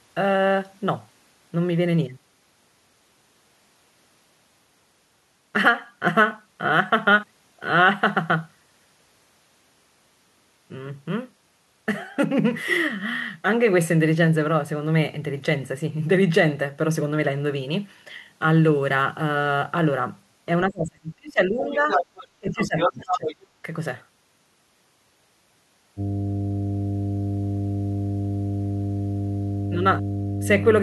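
From 20.69 to 21.88 s the talker's speech dips by roughly 30 dB, mostly gone for about a second: speech suppressed in double talk, likely from an echo canceller ducking during simultaneous talk. From 21.59 to 22.28 s a second voice, roughly as loud as the talker, comes through: the other side's voice leaking through, likely as uncancelled loudspeaker echo. Both recur, the suppression shallower at about 15 dB from 22.4 to 23.32 s and the leak from 22.5 to 23.36 s.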